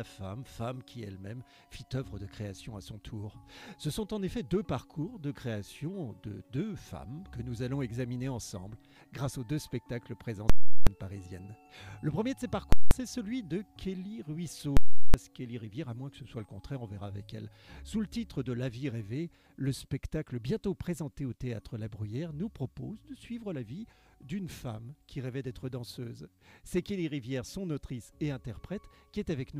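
The audio contains three events of invalid numbers at full scale. At 10.50 to 10.87 s, 12.73 to 12.91 s and 14.77 to 15.14 s, a calculation produced infinite or invalid values that became the largest positive or negative value. Each event is heard as a very loud pop, then dead silence while the output is held flat at one extreme value, then another pop as it releases. The 0.37 s and 0.19 s lengths fit processing blocks of 16384 and 8192 samples.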